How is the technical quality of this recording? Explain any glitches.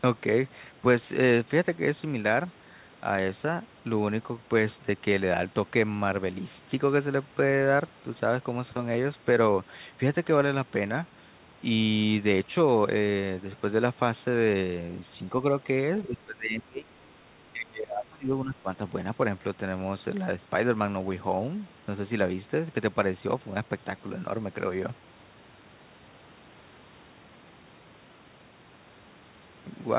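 The speech has two dips in level, heard through a telephone-band call path that stops at 4 kHz, which fits a 64 kbps G.711 codec.

From 16.07 to 16.93 s and from 17.53 to 18.68 s the speech ducks by around 25 dB, likely speech suppressed in double talk, with the echo canceller turning down the near talker during overlap.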